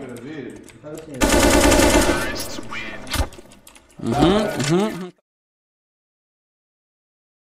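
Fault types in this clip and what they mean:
No technical faults can be heard in this clip. Toward the end the level fades out smoothly, beginning around 4.5 s and reaching silence at 5.21 s, with no click or hard edge.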